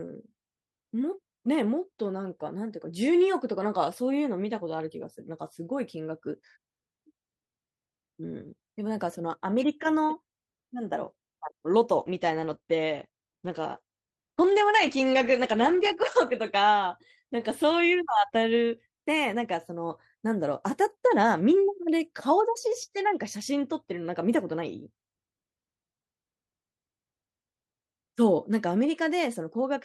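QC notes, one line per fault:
11.96–19.97 s, call bitrate drop: speech turns coarse and muffled, worst for 3.9 s. Top end shrinks from 20 kHz to 8 kHz, fitting about 11 kbps.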